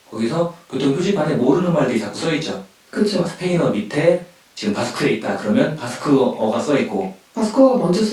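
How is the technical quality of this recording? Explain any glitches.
The technical quality of this recording is sound, with no glitches to explain.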